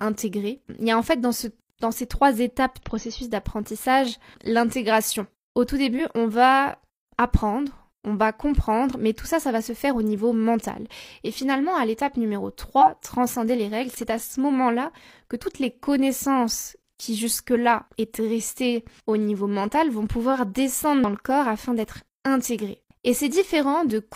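From 0 to 2.0 s, before "trois étapes", faint Wi-Fi interference ticks about ten times a second, matching a 102.4 ms beacon that nearby circuitry rectifies. It sits far below the speech, and its regular ticking, not a continuous tone, sets it apart from mains hum.

Compressed frames skipped occur at 2.79–2.84 s, 5.95–6.00 s (just before "on va"), 12.77–12.85 s, and 21.04 s (between "niveau mental vont pouvoir" and "le corps afin d'être"). Each time, the speech jumps ahead by roughly 50 to 100 ms. Unlike a dropout, there is no silent gap.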